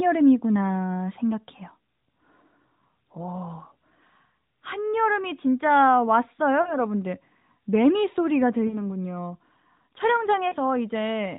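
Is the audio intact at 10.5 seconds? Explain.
No. From 10.48 to 10.54 s there are lost AMR speech frames: about 40 ms of damage, which fits two 20 ms frames failing their checksum. The AMR-NB decoder covers the gap by repeating its last good pitch and vocal tract settings at falling gain, so the sound briefly stretches, warbles and dips. Unlike a hard dropout, there is no abrupt silence or click, only a smeared, fading hold before the narrowband signal recovers.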